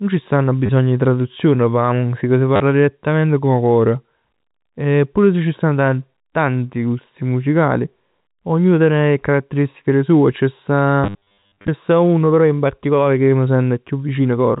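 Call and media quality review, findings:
Short robotic stutters: 0.66 s after "c' stanno" (30 ms), 2.56 s after "p' 'a musica si" (40 ms), and a scattered buzzy stretch at 11.04–11.68 s before "sta uno però in". The cause is packet loss with the last packet repeated. The repetition period fits 10 ms packets, giving a 100 Hz buzz. The longest run is 60 ms. G.711 band limit at 4 kHz.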